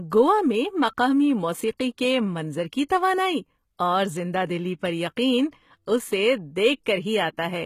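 Throughout, the speech carries plainly audible HE-AAC compression damage, likely from a low bitrate near 20 kbps. Unlike simple muffling, treble remains up to 14.9 kHz but sounds copied, so sibilants turn gritty and metallic.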